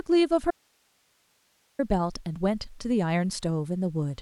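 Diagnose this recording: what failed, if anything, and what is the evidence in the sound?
Audio dropout to a faint residue from 0.51 to 1.79 s: the speech cuts out abruptly for about 1.3 s, leaving only hiss roughly 40 dB below the signal level. The path downstream stayed live, pointing to a likely intermittent analogue connection upstream.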